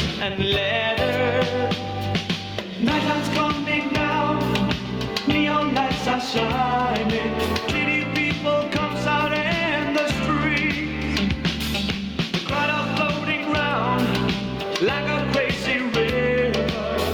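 Throughout the clip the sound is squashed, loud and soft parts pulled closer in level, a gain pumping swing of around 10 dB, likely from excessive gain hitting a fast limiter.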